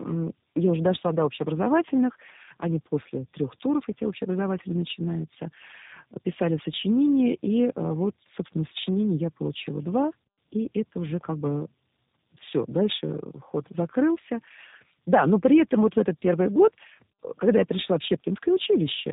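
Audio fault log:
Throughout, tandem speech coding: the speech was coded by two low-rate speech codecs in a row, likely AMR-NB then G.729A, so it sounds rough, warbly and muffled, with nothing above 3.8 kHz.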